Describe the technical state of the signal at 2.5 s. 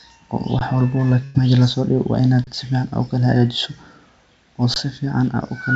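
An underrun with held sample sits just before that point, from 2.44 to 2.47 s. The output buffer ran dry for about 30 ms, and the converter kept putting out its last value, so the speech waveform flattens at a non-zero level and simply stops without a click. Almost nothing was lost, so playback resumes where it left off and the restart is soft. The G.722 call path's 8 kHz band limit applies throughout.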